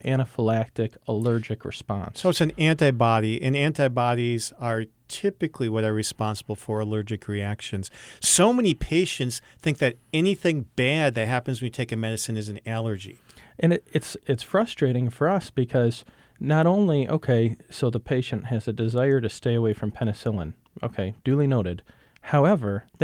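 Nothing stood out on listening to this speech recording.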